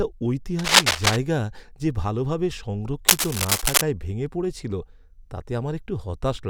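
From 0.59 to 1.17 s and again from 3.08 to 3.81 s, cable scratch noise rises above the speech as dense, ragged rustling, likely a worn connector shifting its contact resistance.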